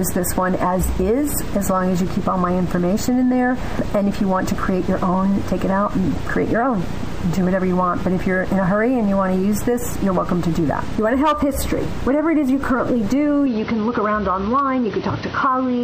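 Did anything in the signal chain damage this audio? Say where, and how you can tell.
Yes. At 13.46 s the sound suddenly turns duller and stays that way to the end. Nothing above about 6.1 kHz survives from that point. There is no gap at the change and no obvious level jump. A faint new noise floor appears, far below the signal. This points to the input stage. The likely cause is an input switched to a poorer device mid-recording, whose narrower band and own background noise replace the original microphone's.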